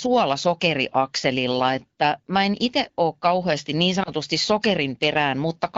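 A speech clip with a brief dip or warble in the sound from 4.03 to 4.10 s, just after "itse ole kauheasti niin", caused by lost AMR speech frames. The dropout sounds like a single lost 20 ms frame. A radio error corrupted it, so the decoder filled the gap by repeating the last good pitch and vocal tract settings at reduced gain. The sound then recovers with a short, weak or rough onset. The speech is carried by the AMR wideband (HD Voice) codec, and its light coding character fits a rate of 12.65 kbit/s.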